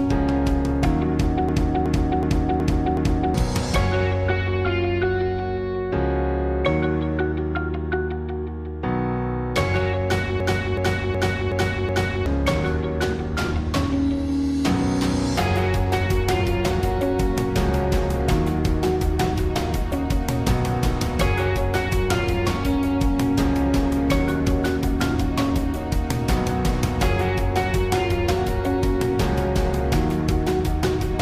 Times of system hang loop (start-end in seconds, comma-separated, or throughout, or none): 1.49-3.34, 10.40-12.26